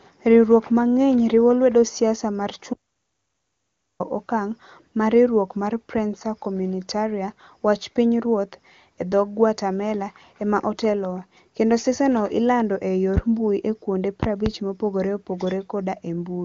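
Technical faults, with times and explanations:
2.74 to 4.00 s, audio dropout to silence: the speech cuts out abruptly and returns about 1.26 s later. The gap is silent with no room tone left. The input was likely lost, and the recorder kept writing silence.
13.17 to 14.50 s, loud pops: one sharp pop at 13.17 to 13.21 s, then two in quick succession between 14.23 and 14.50 s. Each peaks about 15 dB above the speech, which carries on underneath. A sudden voltage step is the likely cause.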